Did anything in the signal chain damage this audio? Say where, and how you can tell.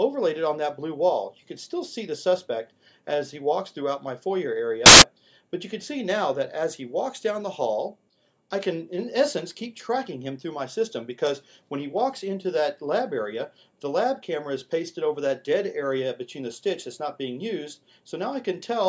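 Yes. From 4.86 to 5.02 s there is a 0.16 s burst of very loud white noise with hard edges, which points to file tags played as audio at the storage and file-parsing stage. The block is compressed picture data, likely an embedded cover image, that the player or decoder read as samples. Compressed data has nearly random byte values, so it decodes as broadband noise at high level, starting and stopping abruptly at the block boundaries.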